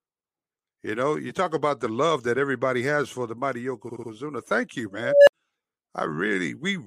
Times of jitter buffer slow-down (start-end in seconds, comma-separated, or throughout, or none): none